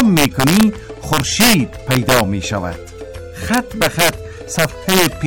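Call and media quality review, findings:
Integer overflow. Violent cracks on loud passages at 0.00–0.63, 1.13–1.54, 1.91–2.20, 3.54–4.09 and 4.59–5.06 s. Gain stage driven about 4 dB past full scale (about 2 dB at 1.91 s). Peaks wrap to opposite sign instead of saturating. Harsher than clipping.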